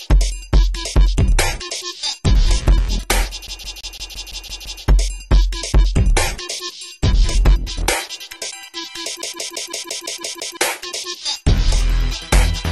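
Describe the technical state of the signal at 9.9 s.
At 9.9 s the sound is caught in a fast, even stutter: a slice of about 169 ms plays over and over, eight times in all, with a brief mute at each jump, from 9.22 s to 10.57 s. This is the CD stuck on one turn fault. A scratch knocks the laser back one track at the same point of every rotation, so the player keeps rereading that same short stretch instead of moving on.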